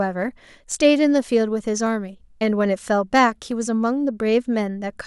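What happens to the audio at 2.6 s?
At 2.6 s the speech carries on intact, with no dropout, click, distortion or other fault.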